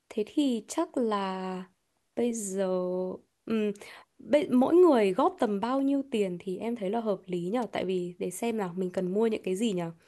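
Loose connector crackle hits this speech clip from 7.62 to 7.70 s: a worn or dirty contact briefly makes and breaks, chopping the signal into an irregular scratchy burst.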